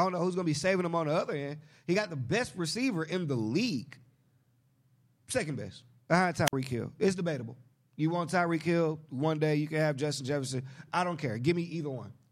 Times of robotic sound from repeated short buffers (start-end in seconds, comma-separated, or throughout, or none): none